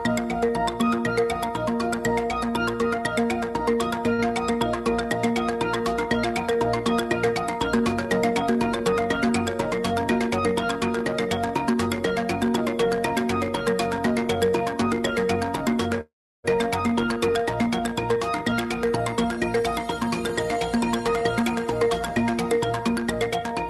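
A short stall from a late packet occurs at 4.13 to 4.28 s. One packet missed its playout slot, the jitter buffer ran dry, and the receiver stretched the last sound for about 52 ms before resuming at the same point. A sound is held slightly too long, with a faint buzzy smear, but nothing is lost.

A call audio freeze follows at 16.01 to 16.46 s, likely caused by packets held up in transit. The receiver continued the last sound as a fading buzz, then fell to silence for about 330 ms. When the packets arrived, playback resumed where it had stopped, inserting a gap of about 432 ms.

A jitter buffer speed-up runs from 18.15 to 20.11 s and again from 20.57 to 23.56 s. The buffer had built up extra delay, so the receiver trimmed many short pitch-period slices. The first stretch plays at about 105% speed, shedding roughly a tenth of a second. The second plays at about 110%, shedding roughly 0.3 s. 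Both sound hurried without any change in pitch. Through the Opus call path the top end stops near 12 kHz.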